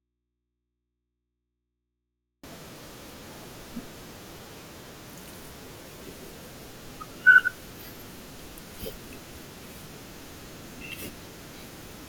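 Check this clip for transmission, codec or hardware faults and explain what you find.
One fault stands out, an audio dropout to a faint residue at the very start. From the opening until 2.44 s the speech is absent, and all that remains is a low mains hum roughly 50 dB below the level of the talking that follows. The speech then cuts in abruptly rather than fading up. The likely cause is a break in the signal feed while the downstream input stayed live, picking up hum from its open connection.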